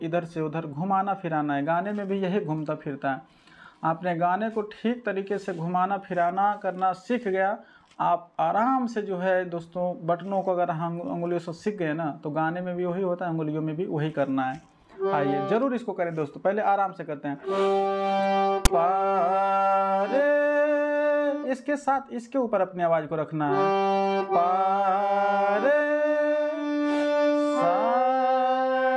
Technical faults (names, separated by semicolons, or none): file tags played as audio